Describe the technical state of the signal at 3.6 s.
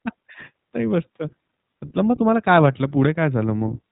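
At 3.6 s the speech is still passing through the iLBC codec, as it does for the whole clip. Each 20 ms frame is coded on its own, which fits the 15.2 kbps mode, with nothing above 3.8 kHz, so the sound is muffled and plainly rough and synthetic.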